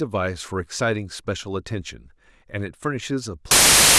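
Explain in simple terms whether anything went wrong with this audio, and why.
From 3.51 s to the end, the speech turns into loud hiss: samples built from the wrong bytes, so each value is scrambled into noise.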